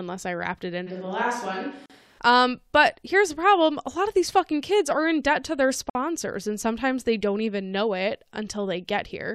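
From 0.89 to 2.18 s the speech turns hollow and roomy, thinner in the bass, roughly 5 dB quieter and with more room noise, then snaps back: a switch to a distant microphone, likely because the close microphone dropped out. Inside that stretch, at 1.86 to 1.90 s, the sound stops for 39 ms with smeared edges, and a 53 ms silence follows at 5.90 to 5.95 s. These are gaps at the joins of encoded pieces. They fall 4 s apart, which fits 4-second pieces joined without trimming encoder delay and end padding.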